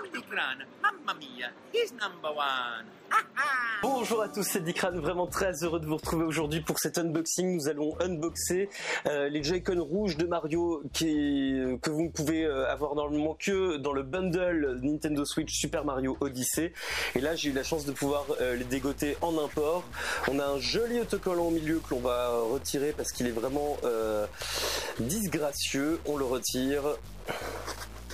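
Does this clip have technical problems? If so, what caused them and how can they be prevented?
Yes. From 16.77 s to the end the audio turns distorted, and pauses fill with a low noise near about -45 dBFS. This is a stuck bit, likely from a broken data line or converter, with one bit offsetting about half the samples. Unlike clipping, it fouls quiet passages too. Checking converter wiring and running bit-pattern tests on the capture chain would catch it early.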